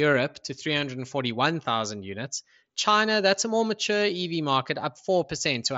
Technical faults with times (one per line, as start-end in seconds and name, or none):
none